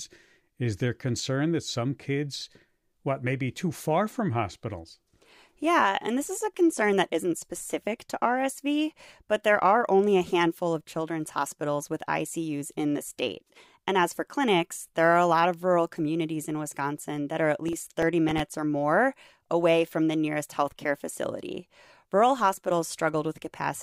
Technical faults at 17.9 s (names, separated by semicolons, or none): processor overload crackle